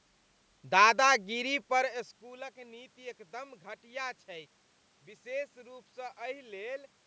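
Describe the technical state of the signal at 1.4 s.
At 1.4 s the speech signal is intact, with no technical fault, only the ordinary room noise and the normal call microphone processing.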